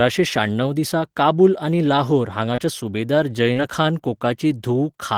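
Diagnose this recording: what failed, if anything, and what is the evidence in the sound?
The failure is on the network side: two bits of short concealed packet loss in this speech clip. Listen at 2.55 to 2.60 s and again at 3.54 to 3.57 s, where there's a quick smear or wobble. Each gap is about 20 ms, which fits a single lost packet. The receiver's decoder papered over the holes by carrying the last sound forward for about 22 ms and 16 ms, then blending back into the real audio.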